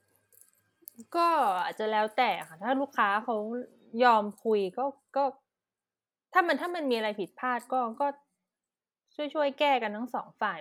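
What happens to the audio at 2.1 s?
Nothing goes wrong at 2.1 s; the speech carries on intact through that moment, with no dropout, click, distortion or other fault to be heard.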